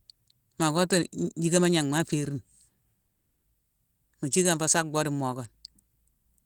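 A long network dropout likely halted delivery from 3.01 to 3.46 s. The sound smears into a fading buzz, then 180 ms of silence, and 420 ms of speech is lost.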